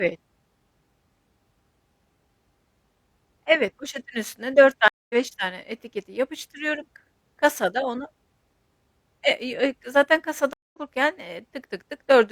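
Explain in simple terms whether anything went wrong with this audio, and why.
The speech briefly goes silent, for about a fifth of a second, at 4.88 s and 10.53 s, then resumes slightly further along. Each is a stream reconnect: the connection dropped and playback restarted mid-stream.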